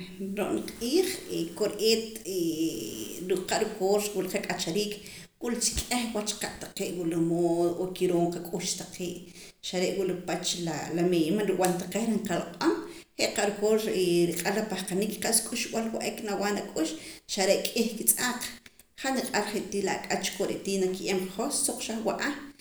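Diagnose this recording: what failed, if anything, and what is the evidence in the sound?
Nothing in the signal chain has failed: the speech arrives continuous and intact, with no audible break, distortion or level disturbance anywhere along its length.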